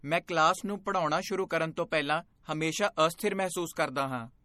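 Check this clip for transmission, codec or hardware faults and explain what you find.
Two codec faults are present: MP3 compression damage throughout, and three pre-echoes on sharp attacks.

MP3 compression is the likely cause of the damage that runs through the whole clip. An encoder short of bits discards weak frequency lines and caps the treble, here with nothing above 17.5 kHz, and the amount of damage points to a low rate around 48 kbps. The result is plainly audible: the speech takes on a watery, swirling texture as detail flickers in and out between frames, sibilants turn metallic, and onsets lose their crispness.

Pre-echo occurs at 0.85 s, after "ਮੈਂ ਕਲਾਸ ਨੂੰ"; at 1.90 s, after "ਪੜ੍ਹਾਉਣਾ ਸ਼ੁਰੂ ਕਰਨ ਤੋਂ"; and at 3.76 s, after "ਹਮੇਸ਼ਾਂ ਅਸਥਿਰ". In each case a sudden attack lands late in a transform block. The coding noise, scaled for that loud moment, is spread across the whole block and leaks into the near-silence just before the attack. 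That leak is heard as a short hiss ahead of the onset, lasting about 15, 14 and 11 ms respectively, and the attack itself sounds softened.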